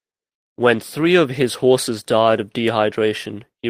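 A short recording of speech, with nothing technically wrong to point to. No fault can be heard anywhere in it.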